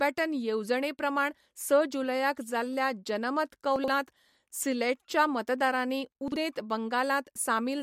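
Speech with two brief jumbled moments caused by chunks out of order. At 3.76 to 3.88 s, right after "जुलयाक जाल्ल्या जनमत", a 40 ms chunk plays two chunks late. At 6.28 to 6.36 s, after "सिलेटच्या मतदारांनी", one plays a chunk late. Each swap leaves three hard joins, heard as a jumbled moment. A spectrogram shows thin vertical broadband lines at the joins and formant tracks that jump back and forth, while the waveform shows abrupt steps between segments.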